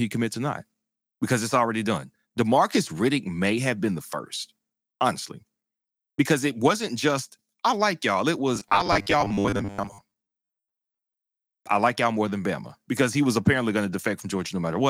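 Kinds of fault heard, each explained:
Robotic sound from repeated short buffers: speech becomes a rigid metallic buzz locked at 100 Hz, likely from repeating 10 ms chunks; unlike dropouts, nothing goes silent.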